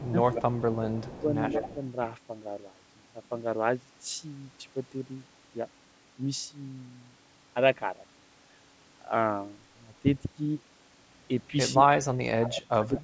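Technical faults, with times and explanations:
0.00–0.15 s and 1.03–1.28 s: speech suppressed in double talk. With both ends likely talking at once, the echo canceller could not tell this talker from the loudspeaker echo and turned everything down. The sound dips by up to about 20 dB in the first stretch and about 15 dB in the second.
0.31–0.73 s, 0.89–1.20 s and 1.50–1.74 s: echo leak. The far end's echo canceller likely let part of its loudspeaker pickup through, so a copy of the sound returns about 185 ms late. It is strong at first, about 5 dB below the direct sound, then fainter at about 20 dB and 10 dB below.
11.8–12.64 s and 12.83–13.00 s: speech suppressed in double talk. The canceller likely clamped down again while both sides overlapped. The first stretch is the deepest in the clip, dropping by about 30 dB, and it affects the sound for around 0.7 s. The second dips by about 10 dB.
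12.54–12.62 s: echo leak. A short scrap of echo likely slipped past the far end's canceller during the suppression. It arrives about 212 ms late and sits about 10 dB below the direct sound.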